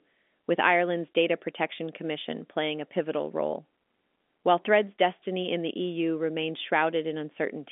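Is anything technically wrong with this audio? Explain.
No, the speech comes through a narrow telephone band with nothing above about 3.7 kHz, which fits ordinary G.711 telephone coding at 64 kbps working as intended, and the clip has no technical faults.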